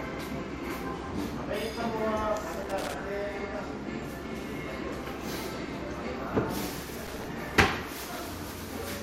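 At 2.53 s a loose connector crackle breaks out and runs until 2.94 s. It returns from 7.07 s to 7.25 s. Both bursts are irregular and scratchy. A worn or dirty contact is making and breaking as it moves. Each break chops the signal into rough fragments. Any DC on the line turns those breaks into pops. The second burst is shorter, under a fifth of a second.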